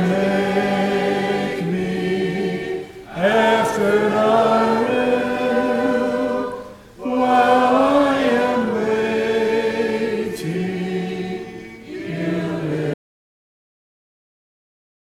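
At 12.94 s the audio drops out to dead silence, with no room tone, through the end; likely a lost input while recording carried on writing zeros.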